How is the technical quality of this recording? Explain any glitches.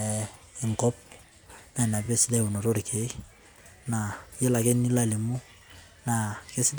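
There is one glitch, a case of repeated frames. It occurs from 2.05 to 2.07 s. A 23.2 ms slice of the speech plays twice in a row. That length fits a single compressed frame that was written or sent a second time. The decoder simply plays the same block again. The result is a brief stutter. The recording runs 23.2 ms longer because of it.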